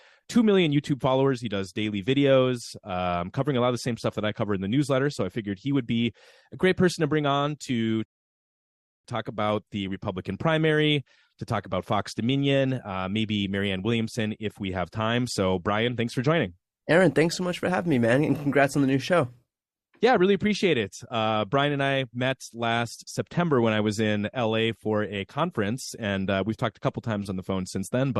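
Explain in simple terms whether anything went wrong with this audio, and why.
At 8.05 seconds the speech stops dead and stays silent until 9.05 seconds. This is a rebuffering stall. The player ran out of downloaded audio and waited for more. The speech then carries on from the exact same point, so nothing is missing. The clip just runs about one second longer.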